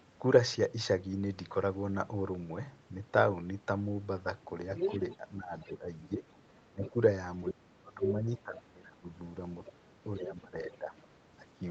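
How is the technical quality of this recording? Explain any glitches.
Two kinds of echo fault affect the speech, and they overlap across the second half.

Other side's voice leaking through, at 4.75–6.9 s, 7.46–8.57 s, 9.65–9.71 s and 10.29–11.04 s: residual loudspeaker echo, likely missed by the canceller, adds a second voice. It is about as loud as the speech at first, then about 15–20 dB quieter. A spectrogram shows a second set of harmonic striations.

Speech suppressed in double talk, at 5.17–9.11 s and 9.7–10.93 s: the canceller likely turns the talker down while the far side speaks, cutting level by up to about 20 dB. The waveform shows notched, pumping envelopes.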